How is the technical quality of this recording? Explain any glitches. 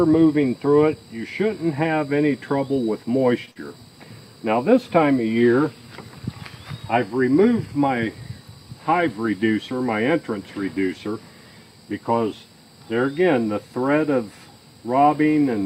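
Two network glitches sit back to back just after the three-second mark.

Short stall from a late packet, 3.45 to 3.49 s: a packet arrived late, the jitter buffer ran dry, and the receiver held the last sound for about 17 ms before resuming where it left off. Nothing is lost, but that sound lingers with a slight buzz or dip, and playback runs 17 ms later from then on.

Short concealed packet loss, 3.51 to 3.57 s: about 40 ms of audio never reached the decoder, so the receiver extended the preceding sound across 43 ms and blended back into the real signal. It comes across as a brief smear or wobble.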